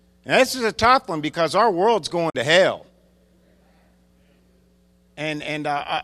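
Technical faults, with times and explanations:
2.30–2.35 s, AAC frame loss with muting: right after "one because our world's" the speech drops into a soft-edged hole of about 50 ms before "to hell" resumes. The decoder zeroed the missing frames, so the overlapping windows fade the sound out and back in. The gap's length fits roughly five lost 10 ms frames of low-delay AAC, likely AAC-ELD. The waveform tapers smoothly to flat silence and back, and the spectrogram shows a clean vertical blank band across all frequencies.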